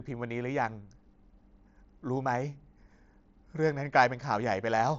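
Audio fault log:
No fault to log: the speech comes through the Bluetooth mSBC headset codec as that path normally sounds, with nothing above about 7.7 kHz.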